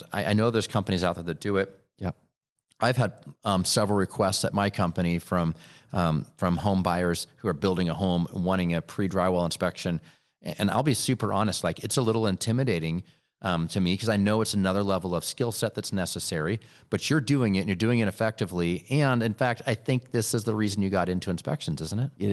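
No technical faults are audible.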